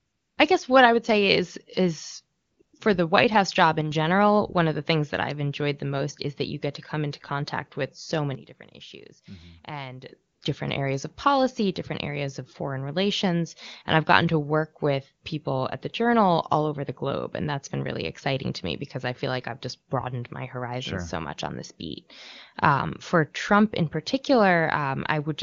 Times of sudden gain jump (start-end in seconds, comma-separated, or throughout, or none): 3.81-3.91, 8.35-10.09